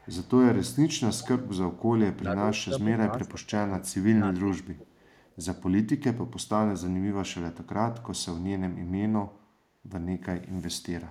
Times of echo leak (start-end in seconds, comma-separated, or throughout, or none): 0.00-0.29, 1.21-1.28, 4.90-5.29